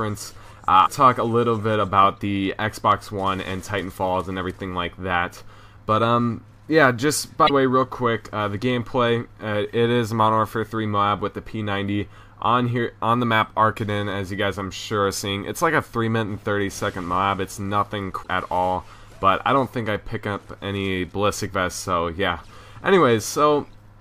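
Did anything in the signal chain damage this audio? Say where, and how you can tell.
Yes. The damage sits at the codec stage: there is damaged data in the compressed stream, so the decoder hit frames it could not read correctly, lost sync and had to hunt for the next valid frame header. Each hit is heard as a brief chirp, squawk, click or short hole breaking into the sound, at 0.82 to 0.88 s, 7.46 to 7.50 s and 18.20 to 18.28 s, each lasting well under a tenth of a second.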